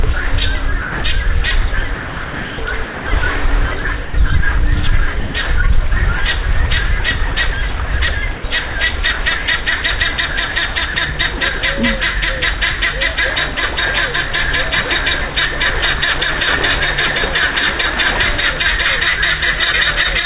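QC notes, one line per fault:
0.82–1.04 s, 1.94–2.58 s, 2.84–3.06 s, 5.20–5.34 s, 8.36–8.44 s, 10.94–10.96 s, 11.38–11.40 s: sound dropped by the voice detector. The sound gives way to steady synthetic noise for 20 to 640 ms, then resumes. Likely the sender's voice detector classed these passages as background, stopped transmitting, and the receiver filled the gaps with comfort noise.
3.82–4.14 s: sound chopped by the voice detector. Over this stretch about 120 ms of sound is swapped for comfort noise in pieces, so the passage turns choppy. Likely cause: the detector toggling between sending and muting more than once.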